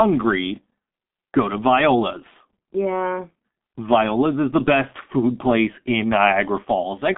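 G.723.1 codec damage runs through the whole of this speech clip: nothing survives above about 3.8 kHz, and the band sits roughly between 200 Hz and 3.5 kHz, so it sounds muffled. The 30 ms frames and slow voice-model updates blur consonants and add hoarseness, which fits a rate near 6.3 kbit/s.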